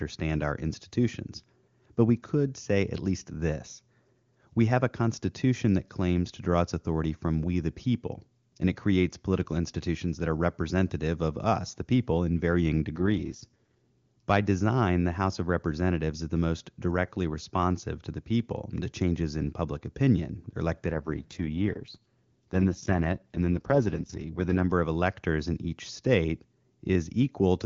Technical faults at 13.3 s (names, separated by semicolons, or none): AMR rate drop